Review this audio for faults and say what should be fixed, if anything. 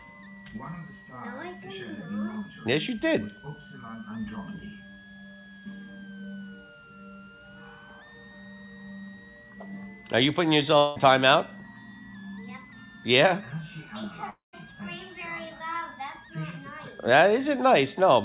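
Switching supply whistle runs throughout: a high whistle around 1.5 kHz, wandering between 1.38 and 2.01 kHz, sits about 25 dB below the sound. A switching power supply in audible burst mode, its frequency shifting with load, puts this tone in, and the narrowband call path, with nothing above 4 kHz, passes it through. Preventing it means powering the equipment from a linear or better-filtered supply, away from the audio wiring.

Long network dropouts occur at 10.78 to 10.98 s and 14.30 to 14.55 s, with about 0.18 s and 0.24 s missing. Each time the receiver stretches the last sound into a fading buzz and resumes later without the lost audio, most likely packets that never arrived. Preventing this takes a more stable network link and a deeper jitter buffer.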